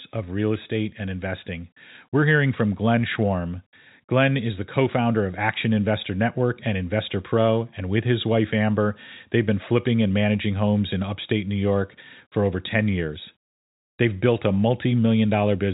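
Nothing stood out on listening to this speech, which carries the narrow band of ordinary telephone audio.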